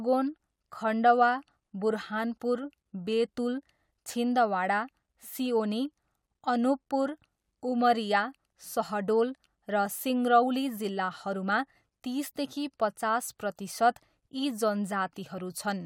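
No technical faults detected anywhere in the speech recording.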